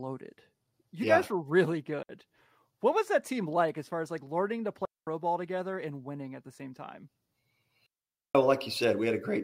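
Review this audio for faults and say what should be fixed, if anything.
Clean holes of near silence, with no noise burst either side, cut the speech at 2.03 s (63 ms, after "yeah guys were really"), 4.85–5.07 s (between "as like learning to" and "ball together and winning") and 7.86–8.35 s. This is digital wireless dropout: the receiver lost too much data and muted with a very short fade. To prevent it, keep clear line of sight and short range between transmitter and receiver, and move off congested frequencies.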